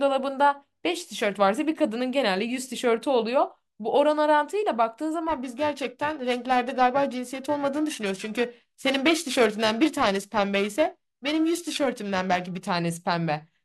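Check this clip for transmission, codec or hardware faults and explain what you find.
There is one hardware fault, periodic clock jitter, from 5.29 s to 12.70 s. Interference wobbling the converter clock at around 1 kHz puts sidebands either side of every speech component, strongest on the high frequencies. The result is a rough, metallic edge that disappears in pauses. Random jitter would instead add a diffuse hiss.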